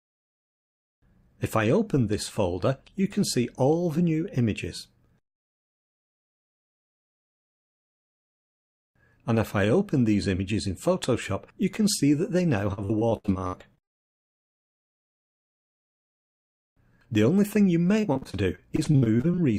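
From 12.73 to 16.23 s, and again from 18.01 to 19.39 s, the stream suffers repeated packet loss (robotic sound). Data keeps arriving late or not at all, and each hole is bridged by extending the preceding sound before the next dropout hits. In the first stretch about a third of the time is patched this way, with holes up to 78 ms. In the second, roughly a quarter is patched, with holes up to 59 ms. Both come out choppy, with fragments missing.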